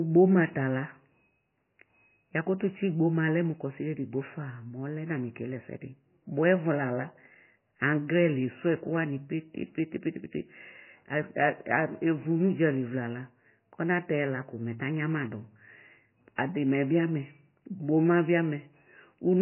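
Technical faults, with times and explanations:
Throughout: MP3 compression. Nothing is heard above 3 kHz, and the sound is heavily damaged, watery and swirly. The likely cause is a very low-bitrate MP3, fitting roughly 16 kbps. Short of bits, the encoder cuts the treble and drops weak frequency lines frame by frame.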